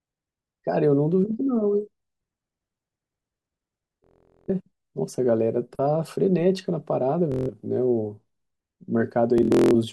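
Speech with Bluetooth stutter at three points: 4.04 to 4.50 s, 7.32 to 7.50 s, and 9.38 to 9.75 s, where the last is broken into separate bursts, the longest about 0.21 s. Packets arrived late or not at all, so the receiver kept replaying its last short slice, giving a machine-gun buzz, before the speech jumped ahead. A waveform shows identical short segments repeating, and a spectrogram shows a regular striped pattern.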